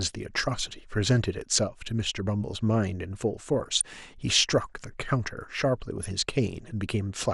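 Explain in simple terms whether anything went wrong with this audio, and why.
Yes, a couple of things went wrong here. The whole speech clip sounds dull and a bit gurgly, with a grainy edge on the voice. That's the sound of MP2 compression, the kind used for digital radio, most likely squeezed hard. The encoder chops the sound into many narrow frequency slices, and when it runs short of data it simply drops the top slices and stores the rest crudely. That's why the treble goes missing and the sound turns grainy.

On top of that there are two short patches of DAB burbling, from 3.53 to 3.81 s and again from 5.98 to 6.09 s. This happens when reception is weak and some data errors slip past the radio's error correction. Individual frequency slices then get short blips of noise, and you hear a brief splutter before things settle again.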